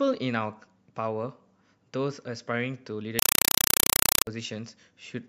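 From 3.19 to 4.27 s there's a compressed stream played as audio. Undecoded AC-3 frames replace the speech with loud, chattering static: 4 ms bursts, 31 times a second.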